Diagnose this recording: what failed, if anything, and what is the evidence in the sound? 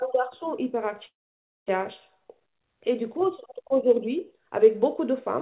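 A long network dropout at the network stage is the likely cause: packets stopped arriving from 1.06 to 1.77 s, and about 0.6 s of speech was lost. The receiver briefly extended the last sound as a fading buzz or hiss, then left 0.55 s of silence before speech resumed past the missing section.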